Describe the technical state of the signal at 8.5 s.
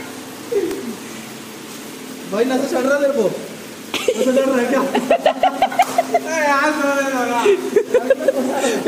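At 8.5 s the signal is intact, with no dropout, distortion or other audible fault at that moment.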